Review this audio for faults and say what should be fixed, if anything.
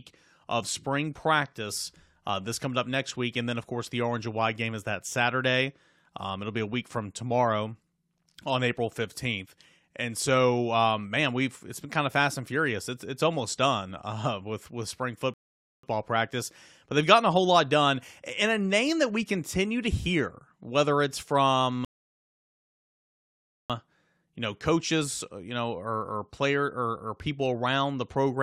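The speech stops dead twice in rebuffering stalls: at 15.34 s for about 0.5 s, and at 21.85 s for about 1.85 s, resuming at 23.70 s. Each gap is clean silence followed by a restart from the exact point where playback halted, so nothing is skipped. The player simply ran out of downloaded audio and waited for more. To prevent this, hold a deeper playback buffer or drop to a lower bitrate before the buffer empties.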